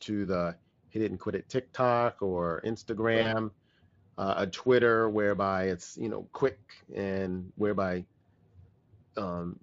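At about 3.21 s the speech hits a VoIP packet loss concealed by the speech codec. Roughly 40 ms of audio went missing, which fits two lost frames, and the decoder filled the gap by carrying its last pitch and filter forward at falling gain. You hear a brief buzzy or noisy smear that fades out, and since each frame leans on the one before, the sound stays off until about 3.32 s, with the Speex coding around it only lightly coloured.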